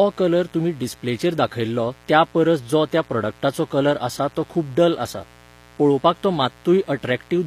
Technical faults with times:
0.00-7.46 mains buzz
0.00-7.46 HE-AAC compression

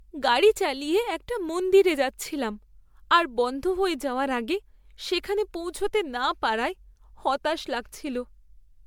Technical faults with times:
0.00-8.86 generation loss

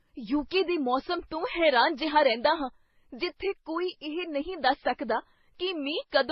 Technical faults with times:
0.00-6.31 transcoding between lossy codecs

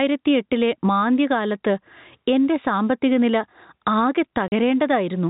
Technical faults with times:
0.00-5.29 gain pumping
4.48-4.52 packet loss filled with silence

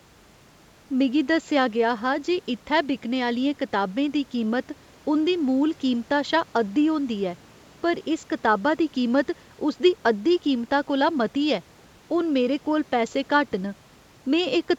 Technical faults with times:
none

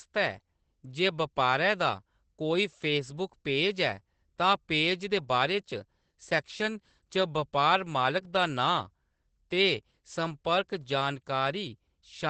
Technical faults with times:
0.00-12.30 Opus voice compression

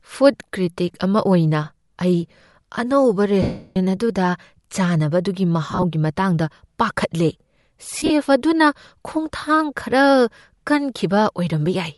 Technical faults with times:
0.00-11.98 Bluetooth LC3 compression
3.42-3.77 lost LE Audio frames
5.71-5.84 lost LE Audio frames
7.98-8.11 lost LE Audio frames

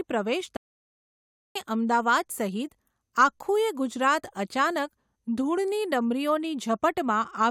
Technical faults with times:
0.56-1.56 playback stall

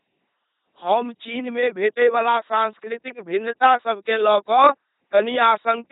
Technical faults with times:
0.00-5.92 LPC-10 vocoder

